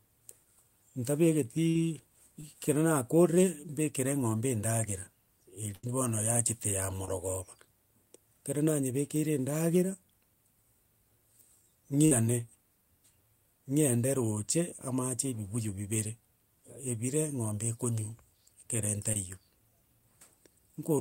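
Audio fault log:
1.69 to 1.77 s, 5.75 to 5.85 s, 12.05 to 12.13 s: burst of packet loss. Several consecutive packets failed to arrive in time, so the receiver extended the last decoded sound for 55 ms, 81 ms and 56 ms while fading it down, heard as a held, dimming buzz or hiss. Playback then picks up with 60 ms, 80 ms and 60 ms of speech gone; the middle gap lands just before "bono yachete ya".
2.41 s, 7.05 s, 19.13 s: short concealed packet loss. Each time, about 20 ms of the stream missed the decoder's deadline, and the receiver patched the hole by continuing the previous sound, following its pitch or imitating its noise, before blending back into real audio. The result is a brief smear or wobble rather than a clear gap. The 7.05 s event follows "bono yachete ya".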